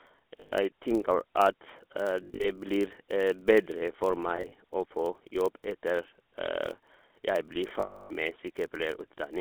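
Throughout, the speech carries GSM full-rate codec damage: the line is limited to about 250 Hz to 3.5 kHz, and the sparse pulse excitation gives a plainly buzzy, gravelly roughness. Under it runs a 43.1 Hz buzz from a filter restarted on every block, which fits a 1024-sample block, with each block starting with a small transient. Lost GSM frames then hold the last sound as a rough metallic ring: for 120 ms at 0.40 s; in scattered gaps from 2.24 s, with the longest about 70 ms; from 4.36 s, with the longest about 40 ms; and for 300 ms from 7.80 s.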